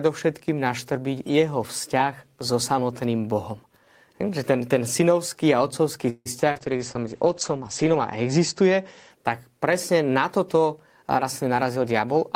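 Just after "ten synovský a otcovský", at 6.09 s, the sound stalls until 6.28 s. This is a call audio freeze. The last sound is stretched into a fading buzz, with about 40 ms of near silence inside it. The likely cause is packets held up in transit, so the jitter buffer ran dry. Nothing is lost. The pause simply adds about 161 ms of delay before the speech resumes.

Two short concealed packet losses follow. The first runs from 6.40 to 6.43 s and the second from 6.51 to 6.57 s. About 20 ms and then 40 ms of audio never arrived in time. The receiver patched each hole by extending the preceding sound and then blending back. Each one is a brief smear or wobble.

From 6.56 to 9.17 s comes a call bitrate drop. The bandwidth estimate fell, and the encoder was pushed to code far more coarsely. The sound fits a fall from about 32 kbps to about 11 kbps. The top end is cut from 20 kHz down to 8 kHz. 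The speech turns muffled and watery, worst for about a second and a half, before the clarity returns.

From 11.03 to 12.30 s there is a jitter buffer speed-up. Too much audio had piled up in the buffer. To shrink the delay, the receiver snipped out short pitch-period pieces again and again, removing about a tenth of a second in total. The speech plays at about 108% speed with its pitch unchanged. It sounds hurried.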